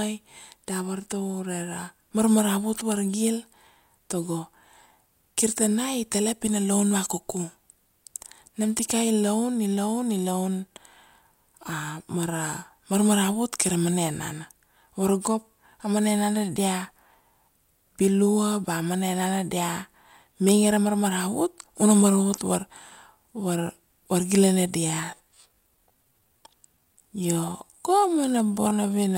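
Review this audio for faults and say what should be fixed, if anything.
A time-stretched section runs from 24.80 s to the end at 29.18 s. The speech abruptly slows to 0.68 times its pace at unchanged pitch and drags, likely because software repeated short pieces to lengthen it. On a spectrogram, harmonics keep their height while syllables widen; the waveform shows drawn-out, repetitive envelopes. Edit the speech to length rather than stretching it to fit.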